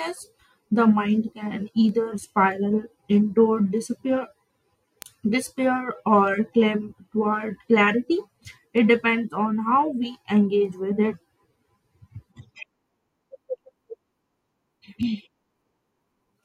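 A receiver on its own clock, not locked to the sender's, drifts by roughly 40 ppm and drops or repeats a single sample at each slip. From 0.64 s to 16.28 s this produces word clock ticks: around thirty sharp clicks, about every 0.7 s, through the speech.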